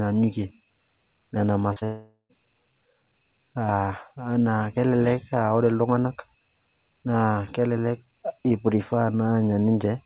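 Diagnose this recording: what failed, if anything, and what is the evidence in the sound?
Network stage: short concealed packet loss at 1.73 and 1.79 s. Each 30 ms gap is smeared over as the receiver extends the preceding sound.

From 1.84 to 2.32 s, a fading buzz or hiss decays into silence. This is likely a long network dropout, with about 0.45 s of audio lost.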